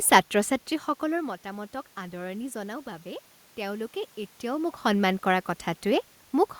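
No technical faults are audible.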